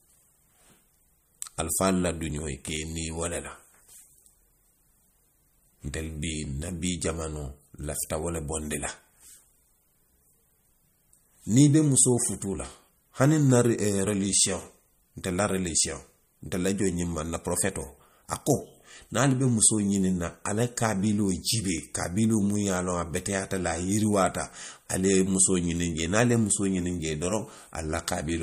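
MP3 compression, likely the cause, runs throughout the speech. The treble stops abruptly at about 15.2 kHz, the fixed ceiling an encoder imposes when bits are scarce, and the damage is plainly audible, which fits a low bitrate near 47 kbps. Weaker frequency lines drop in and out from frame to frame, giving the sound a watery, swirling texture, with metallic chirps on s sounds and smeared attacks.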